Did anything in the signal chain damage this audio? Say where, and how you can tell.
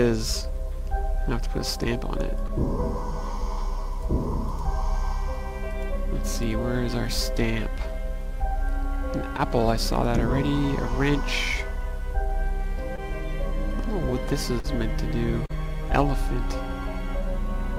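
Yes, at the network stage: short concealed packet loss at 2.47, 9.37, 12.96, 14.6 and 15.46 s, with 20 ms missing at the first three and 40 ms at the last two. The decoder continued the preceding sound across each gap, leaving brief smeared, frozen spectrogram patches.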